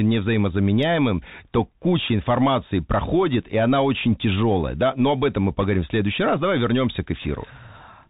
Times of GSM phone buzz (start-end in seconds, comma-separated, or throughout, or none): none